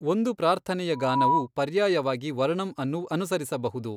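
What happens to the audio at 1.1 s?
A loudspeaker feedback squeal runs from 0.92 to 1.48 s, between "ಒಂದು ಪ್ರಾರ್ಥನೆಯ" and "ಪರ್ಯಾಯವಾಗಿ ವರ್ಣಂ". The microphone re-picks its own speaker output, and a 974 Hz tone swells over roughly a third of a second to about 5 dB above the speech. On a spectrogram it shows as a bright horizontal line.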